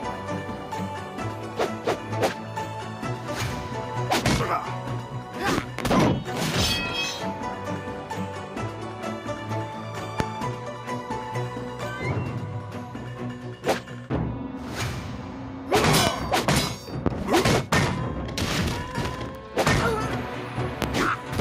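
A loud pop comes as a double pulse from 5.58 to 5.82 s, then singly at 10.20, 16.07, 17.06 and 20.82 s, each peaking roughly 20 dB above the sound, likely from a voltage step. Unlike a dropout, the audio continues uninterrupted beneath each thump.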